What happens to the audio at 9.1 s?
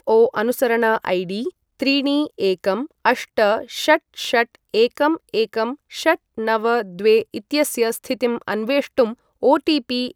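At 9.07 s the speech has a single sharp click. The waveform jumps abruptly from one value to a later one, and that step is what you hear. The likely cause is dropped samples: a tiny run of samples, amounting to a fraction of a millisecond, went missing from the stream. That gap is far too short to remove any audible sound. The click shows in a spectrogram as one thin vertical line spanning the frequency range.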